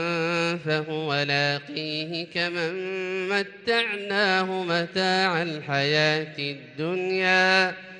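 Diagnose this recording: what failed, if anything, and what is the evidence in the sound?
Nothing in the audio points to a failure at any stage, from the wiring and converter through to storage and playback, so there's nothing here to diagnose.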